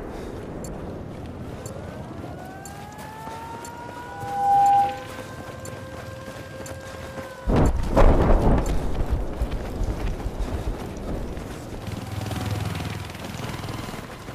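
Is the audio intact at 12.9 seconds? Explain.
Yes, the audio is intact at 12.9 s, with no dropout, click, distortion or other fault at that point.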